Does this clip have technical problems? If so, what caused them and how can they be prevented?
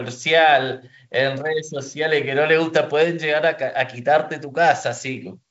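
No, nothing stood out on listening to this speech clip.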